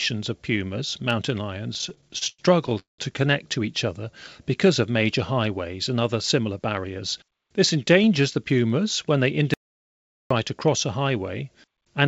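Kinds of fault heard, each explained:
Repeated stalls (stutter): From 1.74 to 3.00 s the speech keeps catching and dragging, with the last sound held over and over, 15 times in all, the longest hold lasting 190 ms. Packets were arriving late or slower than playback, so the jitter buffer kept running dry and the receiver stretched what it last had until more arrived. About 445 ms of filler was added, roughly 35% of that stretch, yet nothing is actually missing.
Jitter buffer speed-up: Between 6.39 and 6.85 s the speech runs hurried, about 111% of normal speed, though its pitch stays the same. Too much audio had built up in the jitter buffer, as happens when delayed packets land together, so the receiver trimmed out short pieces a pitch period or a few long, one after another, to bring the delay back down. Something like 70 ms was cut this way.
Audio dropout to silence: At 9.54 s the speech cuts off mid-flow into silence, with no room tone at all, and resumes at 10.31 s after a gap of about 0.77 s. 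Whatever was said in that time is gone. The silence points to the input being lost while recording carried on, likely from a disconnected device, a failed link or a stray mute. Throughout, the G.722 call path keeps everything below 8 kHz.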